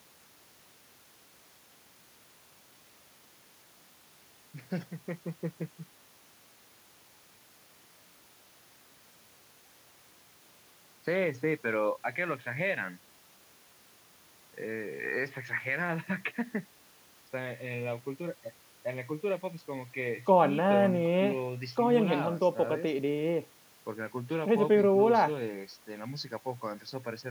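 No technical faults can be heard at any point in the speech, so there is nothing to describe in time order.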